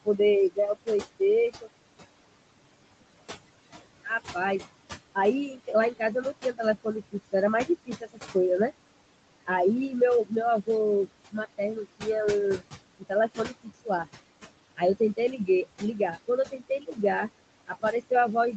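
Noise suppressor artifacts run through the whole clip. The room noise, only about 14 dB below the speech, is pulled down by about 21 dB in the gaps, then rises under each phrase.

Speech cut by the noise suppressor occurs at 0.05–1.69 s, 5.15–8.35 s, 10.28–12.03 s, 12.58–14.07 s, 14.77–16.98 s and from 17.67 s to the end. Treating quiet consonants and endings as noise, the suppressor dips them by about 14 to 21 dB, so fragments totalling about 0.15 to 0.5 s in each of the first five spans sound swallowed.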